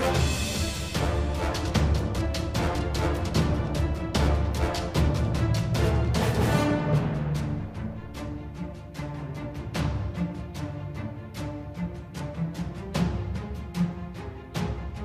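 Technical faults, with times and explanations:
Nothing in the audio stood out as a technical problem on listening.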